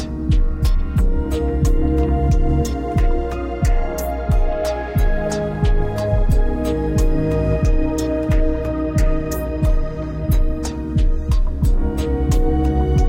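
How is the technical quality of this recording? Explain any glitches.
The technical quality of this recording is sound, with no glitches to explain.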